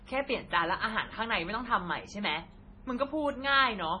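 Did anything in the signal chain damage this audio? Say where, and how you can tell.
Yes. The damage sits at the codec stage and runs through the whole clip: this is most likely MP3 compression at a heavily starved bitrate, consistent with roughly 24 kbps. The speech has a watery, swirling texture, s sounds turn metallic and chirpy, and consonant onsets smear. On a spectrogram the treble stops at a hard ceiling of 10.5 kHz, and below it weak bands flicker on and off as speckled holes from frame to frame, because the encoder zeroes lines it cannot afford to code.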